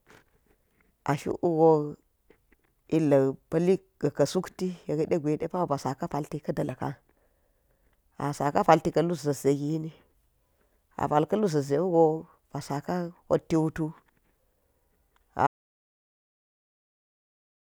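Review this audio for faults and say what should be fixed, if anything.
At 15.47 s the speech cuts off mid-flow into an audio dropout to silence lasting to the end, 2.16 s. Unlike a fade or gate, there's no decay or room tone, just silence, likely from a lost input or mute. Secure connections and monitor input throughout recording.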